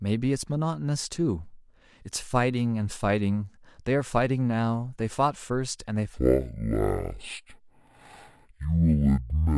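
A stereo stream read as mono takes over at 6.14 s in this speech recording and runs to the end: interleaved left and right samples are fed out one after another as a single channel, so each moment of sound occupies twice as many samples. Playback drops to half speed and an octave low, 12 semitones down, and a fainter mirrored copy of the sound appears in the upper half of the spectrum.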